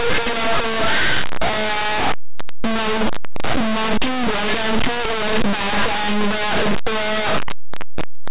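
Throughout, linear audio is read as companded: 8-bit linear samples decoded as mu-law throw values just on one side of zero to the largest outputs while the other side stays small, giving very loud, harsh distortion and broadband spectrogram smear.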